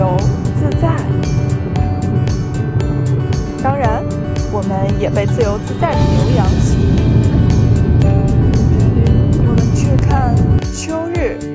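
Nothing here stands out as a technical fault at any point in the audio, so there's nothing to flag.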